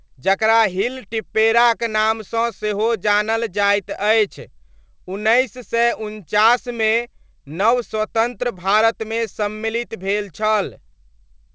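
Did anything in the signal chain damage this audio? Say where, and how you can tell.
No, nothing in the chain damaged it.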